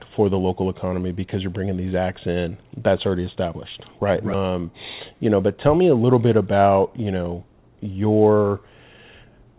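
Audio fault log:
4.34–4.36 s, skip ahead: the speech jumps forward with no gap at all, and roughly a second of it is just gone. A chunk got dropped while later audio was already queued, so the two sides are butted straight together.
5.10–5.55 s, jitter buffer speed-up: the speech runs about 8% fast but keeps its pitch, so it sounds a touch rushed. The buffer was holding too much audio and clipped out short pitch-period slices in a row, a few tens of milliseconds in all, to catch up.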